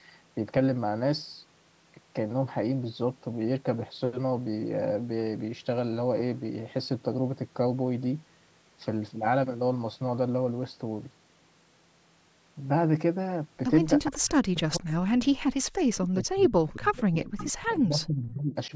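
From 14.09 to 15.6 s, and again from 16.14 to 18.73 s, the speech sinks sharply, dropping by roughly 40 dB in the first stretch and roughly 30 dB in the second. The likely cause is speech suppressed in double talk: the echo canceller could not tell the local talker from loudspeaker echo and attenuated both. On a waveform the envelope drops sharply, and a spectrogram shows speech energy thinning to near-empty columns.

Inside that second stretch, at 16.68 to 16.72 s and at 17.37 to 17.45 s, brief faint scraps of the voice return about 0.47 s late, roughly 25 dB and 20 dB below the speech. This is likely echo leak, where residual loudspeaker pickup escaped cancellation and was sent back. These show as short, weak patches on a spectrogram. They stay within the 8 kHz band limit of the call's microphone processing.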